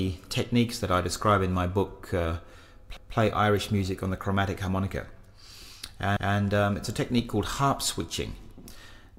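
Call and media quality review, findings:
Overlapping chunks: the processing or transport stage starts each 3.0 s chunk 200 ms before the previous one ends. At each join, that 200 ms of audio plays twice, at 2.97–3.17 s and 6.17–6.37 s.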